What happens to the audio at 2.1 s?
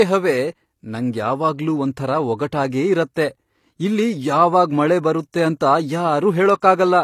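At 2.1 s the speech carries the same gritty, metallic treble heard through the whole clip, the mark of likely HE-AAC compression at a rate that fits about 24 kbps. The top band is rebuilt by copying lower bands upward under a coarse envelope, so s sounds stay bright but turn lispy and synthetic rather than simply dulled, as a low-pass filter would leave them.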